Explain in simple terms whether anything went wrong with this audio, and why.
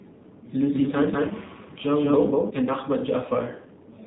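The speech has gone through the AMR narrowband mobile codec for its whole length, cutting everything above 4 kHz and leaving a plainly buzzy, synthetic, phone-like sound.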